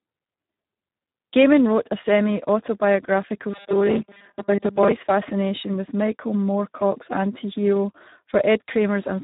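From start to finish the speech carries Speex codec damage, and it is heavy. The CELP coder has too few bits for its excitation, which fits an 8 kbps setting, so voices come out hoarse, buzzy and partly robotic. Nothing remains above 3.8 kHz. Unlike a plain telephone-band filter, which only dulls the sound, the harshness here sits inside the voice itself, and there is none of the swirly, watery smearing typical of MP3 at low rates.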